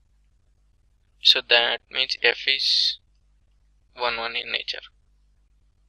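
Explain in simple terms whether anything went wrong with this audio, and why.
From 1.24 s to the end at 5.88 s, a gritty, buzzing fizz follows the louder and brighter sounds. That is crude rate conversion. The sample rate was changed by blending neighbouring samples with no filtering, which fits 44.1 kHz to 48 kHz. This adds stray tones.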